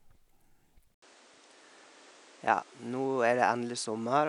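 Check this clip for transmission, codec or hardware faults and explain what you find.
One fault runs from 0.94 s to the end of the clip. After a gap of about 80 ms, the speech drops by about 5 dB, loses everything above 10.2 kHz and sits on a new noise floor about 30 dB below it. This is most likely the input switched to a poorer device, with a different microphone taking over mid-recording. A codec bandwidth drop would not explain the brief silence at the switch or the arrival of fresh background noise along with the level change.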